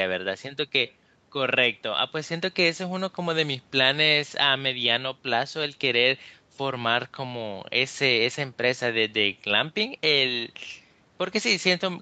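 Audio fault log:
Nothing in the audio stands out as a fault: the speech has the band-limited character of a normal call path, with no content above about 8 kHz, consistent with call microphone processing and an Opus-coded WebRTC connection.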